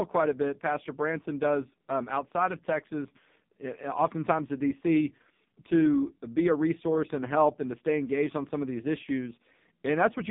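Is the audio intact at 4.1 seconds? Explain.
No. At 4.1 seconds, as throughout the clip, the speech sounds thin, buzzy and synthetic, boxed into a narrow band from about 150 Hz to 3.7 kHz with nothing above it. This is heavy damage from the AMR narrowband mobile codec. It samples at 8 kHz and rebuilds the voice from a vocal-tract model excited by a few pulses per short sub-frame. The coarse, metallic quality points to one of its lowest modes, around 5 kbps.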